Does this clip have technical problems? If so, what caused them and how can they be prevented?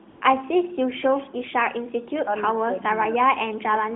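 Yes. AMR comfort noise appears from 0.10 to 0.22 s. For 120 ms the phone judged the line silent and sent no speech frames. The receiver filled that gap with smooth synthetic noise, replacing the real background. Turning off discontinuous transmission, or using less aggressive voice activity detection, prevents it.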